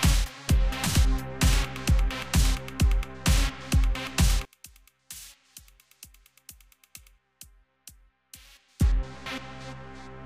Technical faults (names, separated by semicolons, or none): one channel inverted